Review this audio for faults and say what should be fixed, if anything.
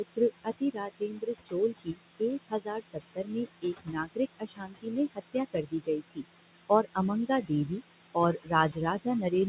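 Overdone noise removal runs through the whole recording. The room noise sat only about 10 dB below the speech, and the reduction was set strong enough to push bands near its noise estimate almost to zero, taking quiet parts of the voice with them. The background becomes near silence with twinkling specks. On a spectrogram, the gaps between phrases look black, with isolated bright dots scattered like confetti. Setting the reduction strength lower, so that it removes only part of the estimated noise, would prevent this.

Noise suppressor artifacts also appear throughout, with the noise cut by about 20 dB. The suppressor decides band by band and frame by frame what counts as steady noise. The residue therefore sinks between phrases and swells back under the speech. A spectrogram shows blotchy, mottled texture around the voiced regions. In the waveform, the floor pumps up and down with the speech envelope. 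Smoothing the gain over time and allowing a higher residual noise floor would prevent this.

Speech cut by the noise suppressor shows up from 0.16 to 6.25 s, about four seconds in total with dips reaching about 22 dB. It appears again from 7.42 to 7.82 s, about 200 ms with dips of about 15 dB, and from 8.14 s to the end at 9.49 s, with dips of about 19 dB. Parts of the speech were treated as noise, so they sound swallowed. The waveform shows the affected speech pulled down toward the background level. Protecting detected speech from suppression would prevent this.

All the content stops at 4 kHz, which fits the G.711 A-law call path.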